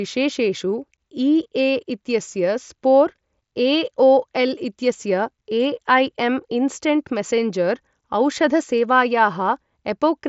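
No technical faults found.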